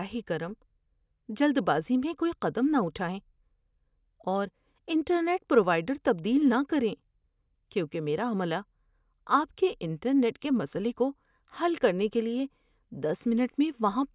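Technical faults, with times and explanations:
No technical faults detected.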